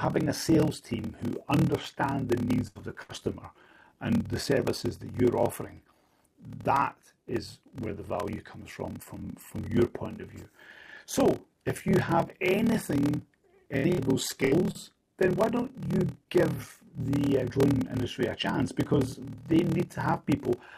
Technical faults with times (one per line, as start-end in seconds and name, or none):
0.00-20.77 block size mismatch (padded)
2.38-2.44 short stall from a late packet
2.68-3.12 burst of packet loss
13.00-13.06 short stall from a late packet
13.77-15.26 repeated packet loss (robotic sound)